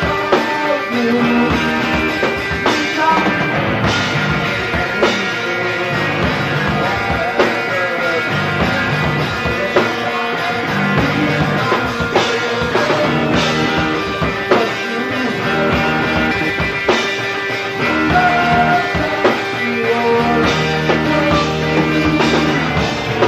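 Around 4.84 to 4.93 s there's a brief garbled flutter, a case of frames out of order: two neighbouring blocks of about 46 ms each got swapped, so that stretch plays back to front in halves. The same thing happens at 12.29 s with shorter 23 ms blocks, at 16.31 to 16.50 s with longer 93 ms blocks, and at 19.07 to 19.17 s. No time goes missing.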